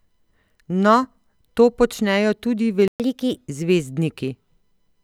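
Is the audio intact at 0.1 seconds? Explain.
Yes, the speech at 0.1 seconds is intact, with no fault audible at that moment.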